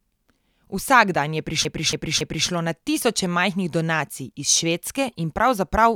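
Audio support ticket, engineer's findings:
Repeated frames, 1.65–2.49 s, just before "na tisoče": 279 ms block stutters, replayed three extra times. Duplicated compressed frames reached the decoder, adding 0.84 s.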